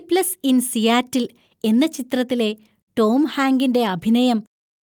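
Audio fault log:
No fault can be heard anywhere in this speech audio.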